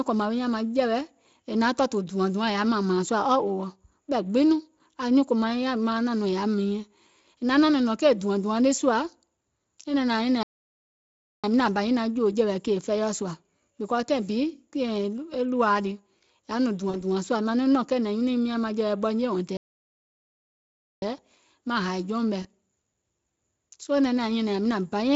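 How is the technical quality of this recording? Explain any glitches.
The speech is interrupted by two gaps of dead air and two tiny fading blips, all heard over a lightly coded Speex stream at about 28 kbps.

Playback stall, at 10.43 to 11.44 s and 19.57 to 21.02 s: the output goes fully silent for about 1.0 s and then about 1.45 s, likely because the player ran dry or its thread blocked. The sound then resumes. The silence is clean and empty, with no synthetic tone filling it.

VoIP packet loss concealed by the speech codec, at 16.89 s for 40 ms and at 22.42 s for 20 ms: the decoder replays its last pitch and filter at falling gain, producing a short, fading smear. The fill is not silent, and the voice sounds weakened just afterward.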